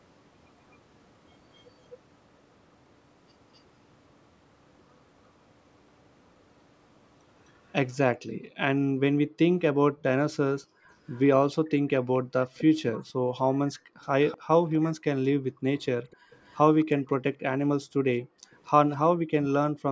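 At 0.71 and 3.54 s, brief, very faint delayed copies of the speech surface for about 60 ms each, trailing the original by 257 ms. This echo leak, likely from a loudspeaker-side echo canceller letting through part of what its microphone caught, returns far more strongly from 11.09 to 16.85 s at about 20 dB below the speech, and again from 18.66 to 18.97 s at about 25 dB down. The fixed 257 ms lag and the distinct, separated repeat mark it as echo rather than room reverberation, which would smear continuously into the speech's own tail.

From 8.18 to 16.3 s, and again from 17.82 to 19.82 s, the room background is pushed down by as much as about 40 dB while the loudspeaker is active, then recovers. This is background gated by the echo canceller, and the dips add up to around a second and a half in the first span and half a second in the second. Unlike an ordinary noise gate, which closes in pauses, these dips coincide with far-end playback, and they overlap the echo passages. 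The band stops at 8 kHz, as expected from the call's microphone processing.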